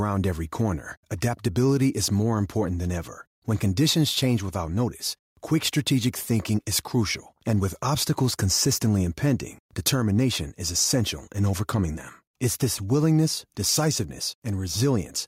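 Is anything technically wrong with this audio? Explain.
Yes, there's gain pumping all the way through. The gain swings by about 5 dB, pulling down under each loud bit of speech, so levels feel squashed. Likely the input gain is set too hot, with a fast limiter clamping down.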